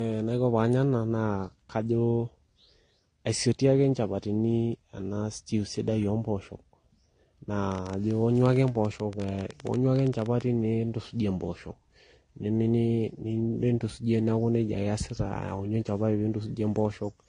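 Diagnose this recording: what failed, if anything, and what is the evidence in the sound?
Codec stage: transcoding between lossy codecs, with two kinds of smearing heard together and nothing above 9.8 kHz throughout, likely AAC then Vorbis re-encoding. A single codec leaves one signature.

Analogue wiring or interface: a train of clicks from 7.72 to 10.42 s, about 12.3 per second, irregular, roughly thirty, about 5 dB above the speech, likely interference. They are near-identical ticks, not gaps.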